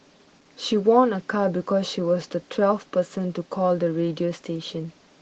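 Speech clip with Opus voice compression throughout: hoarse, slightly robotic hybrid coding, which fits about 16 kbps. A spectrogram shows coarse, patchy energy above 8 kHz over a smeared lower band.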